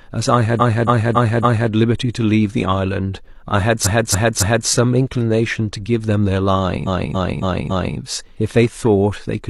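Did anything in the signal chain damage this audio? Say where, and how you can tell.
Yes: repeated frames at 0.56–1.68 s, 3.81–4.66 s and 6.83–7.94 s, a codec-stage stutter. The same 279 ms of speech replays four, three, then four extra times. This fits a run of about six compressed frames being duplicated before decoding.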